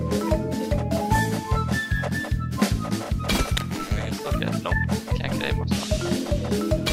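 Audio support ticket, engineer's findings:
No faults found on listening. No symptom to log and no component implicated.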